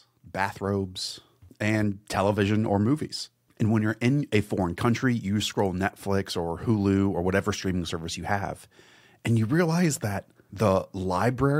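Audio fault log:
No technical faults can be heard at any point in the speech recording, and the signal holds steady throughout with nothing that calls for attention.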